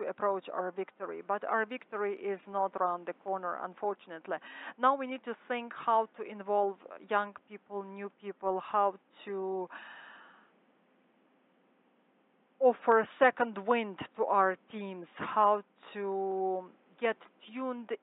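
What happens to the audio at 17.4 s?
Nothing goes wrong at 17.4 s: the audio plays through that moment intact, with no fault to be heard.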